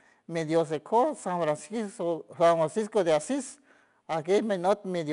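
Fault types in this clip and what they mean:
4-bit ADPCM compression: each sample is stored as a 4-bit step from a predicted value, so a plainly audible gritty hiss rides on the speech throughout and swells with its level, unlike steady hiss. Nothing reaches above 10.6 kHz, fitting roughly 89 kbps.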